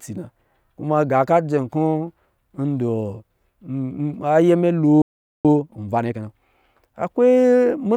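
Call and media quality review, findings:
Playback stall, 5.02 to 5.45 s: speech cuts to silence mid-flow for about 0.43 s. Likely player buffer underrun or blocked output thread starving the device; output resumes once data flows again.

Time-compressed catch-up, 5.45 to 6.29 s: jitter buffer drains the backlog at 1.5x by dropping and cross-fading short segments. Speech sounds rushed, pitch unchanged.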